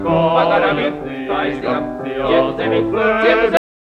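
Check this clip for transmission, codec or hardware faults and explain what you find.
One fault is present, a cut-off end. At 3.57 s the audio stops in the middle of a sound and drops straight to digital silence with no decay. The final buffers were never written or played out, so the tail is simply missing through the end.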